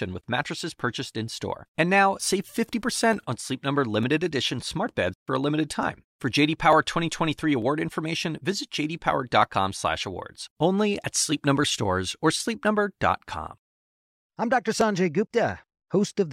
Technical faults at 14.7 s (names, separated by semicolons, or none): clock drift buffer slips